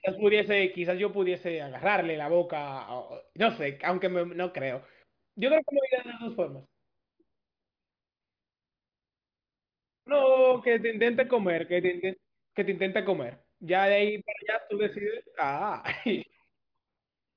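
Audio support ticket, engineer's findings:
Listened through the speech recording and nothing technical stood out, so no findings to log on this ticket.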